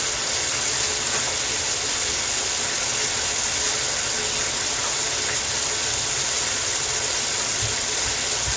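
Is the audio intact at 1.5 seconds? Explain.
Yes, the audio at 1.5 seconds is intact, passing through the call path with its content ending at about 8 kHz, which fits a G.722 wideband codec.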